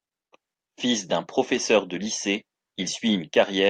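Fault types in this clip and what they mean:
No technical faults can be heard anywhere in the signal, which stays continuous and steady in level throughout.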